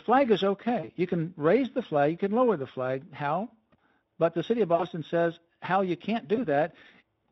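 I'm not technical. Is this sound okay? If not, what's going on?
No. You can hear three quick hiccups from VoIP packet loss concealed by the speech codec: at 0.79 to 0.89 s, at 4.75 to 4.84 s just after "the city of", and at 6.35 to 6.47 s after "you can't". Small chunks of the call went missing (40, 40 and 20 ms), so the decoder guessed by stretching what came before. That turns the speech into a short buzzy blur that fades.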